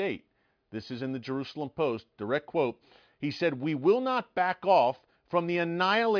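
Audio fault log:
No faults detected.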